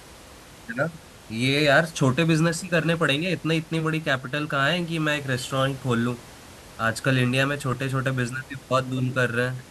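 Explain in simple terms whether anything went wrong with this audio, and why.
Nothing went wrong; I hear no technical problems here.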